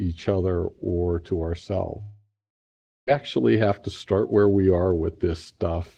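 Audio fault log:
2.01–3.09 s, long network dropout: a 1.06 s stretch of audio likely never reached the receiver, which stretched the last sound into a fading buzz before leaving 0.72 s of near silence; the speech then resumes with that portion gone.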